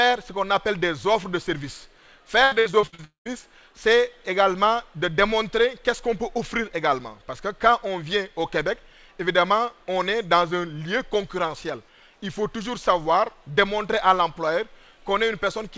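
From 2.44 to 3.43 s the audio shows repeated packet loss, giving a choppy, robotic sound. Seven short holes, the longest about 75 ms, are patched by stretching the preceding sound, so roughly a third of that second is synthetic fill. On a spectrogram the fill appears as smeared, repeated harmonic bands with abrupt seams. In the waveform, the gaps show as stepped, oddly regular segments rather than natural envelopes.

Inside that stretch, from 3.04 to 3.27 s, the sound breaks off for about 220 ms. The last fragment carries on as a fading buzz and then gives way to about 120 ms of near-silence before audio resumes with that portion gone. The likely cause is a long network dropout. The waveform shows a decaying tail collapsing to a flat line. The spectrogram shows the smeared fill thinning into an empty band, and nothing appears above 8 kHz anywhere, as expected from the G.722 call path.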